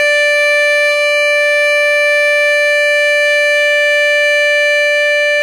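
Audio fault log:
Throughout, HE-AAC compression: the music's upper range sounds bright but gritty and metallic, with high overtones that fail to line up with the lower harmonics, and nothing at all above 14.6 kHz. The likely cause is spectral band replication, which rebuilds the treble by copying lower bands upward under a coarse envelope. That fits a low bitrate around 20 kbps. A plain low-pass filter would sound dull, not synthetically bright, and that synthetic brightness points to this codec.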